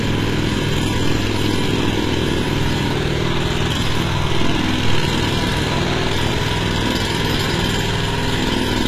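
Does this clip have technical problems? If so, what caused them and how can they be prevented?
Yes. Throughout the clip the treble sounds synthetic: its detail is gritty and metallic, and nothing is present above about 14.9 kHz. This is likely HE-AAC compression at a very low bitrate, consistent with roughly 20 kbps. The codec encodes only the lower spectrum and rebuilds the highs by copying lower bands upward under a coarse envelope, so the upper harmonics don't align with the real ones. To prevent this, encode at a higher bitrate with plain AAC or a lossless format.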